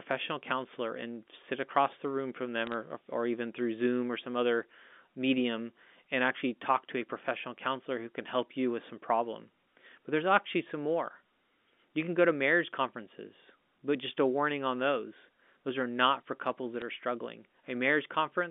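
Bit errors on a digital phone line cause brief sharp ticks at 2.67 to 2.74 s, after "across the room from", and at 16.82 s, before "are struggling". These come from flipped bits corrupting individual samples.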